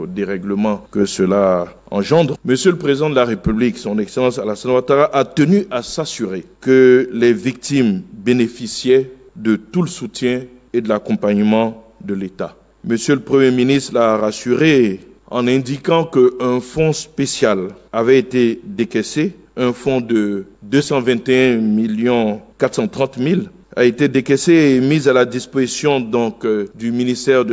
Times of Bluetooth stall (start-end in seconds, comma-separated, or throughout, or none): none